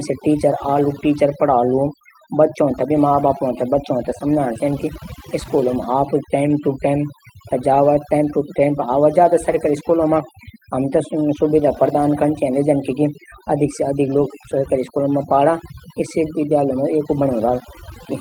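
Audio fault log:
throughout, overdone noise removal: The background sits at near silence, broken by twinkling specks. A noise reduction stage was set far too aggressively for this recording. It pushes individual frequency bands down or off whenever they fall close to its noise estimate. The quieter parts of the speech are caught along with the noise, which leaves the residue glittering.
throughout, clock drift between sender and receiver: Small timing stumbles recur all through the speech at irregular spacing rather than on a steady beat. The sending side's audio clock runs about four percent fast relative to the receiver's. Audio therefore arrives slightly quicker than it is played out, so the jitter buffer keeps creeping toward full. The receiver has to keep shedding material to hold its latency in check, and each adjustment leaves a faint seam in the flow.
0.10 s to 18.14 s, repeated timing corrections: Slight hiccups and a subtly unsteady tempo run from the first moments almost to the end, unevenly spaced but always pulling the same way. 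These are the receiver's trims made to keep pace with a sender running at 104% speed. Short pieces are cut out again and again to drain the excess. Each cut is tiny, so it comes across less as a distinct glitch and more as a restless, unsteady delivery.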